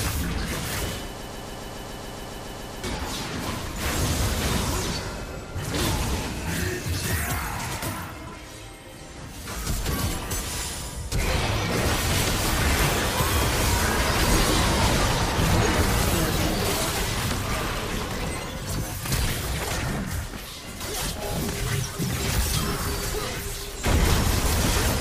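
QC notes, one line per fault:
1.22–2.84 s, broken-record loop: the playback or stream likely stalled and kept resending its last buffered fragment, so a 140 ms slice repeats 12 times back to back, giving a stuttering, mechanical chatter while the sound due in that stretch is lost.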